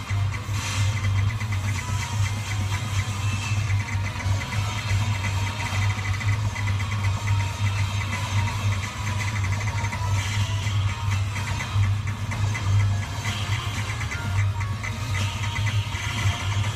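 Nothing in the audio stood out as a technical problem on listening.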